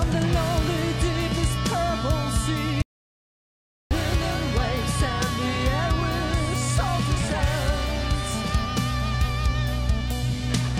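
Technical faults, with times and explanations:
2.82 to 3.91 s, audio dropout to silence: the input feed was likely interrupted, by a lost connection or an accidental mute, while recording continued writing silence. The sound cuts off abruptly into about 1.09 s of total silence, with no room tone, then resumes mid-flow.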